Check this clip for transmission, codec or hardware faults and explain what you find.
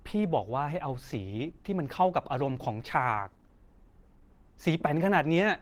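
There is one codec fault, present throughout. The speech sounds hoarse and muffled, with a grainy, roughened texture, and the damage is plainly audible. The top end still reaches about 20.2 kHz, so the bandwidth has not collapsed. This is likely Opus compression in its hybrid mode, where a speech-style coder handles the lower band and the music-style layer fills the upper bands with approximated energy. That fits a starved bitrate around 16 kbps.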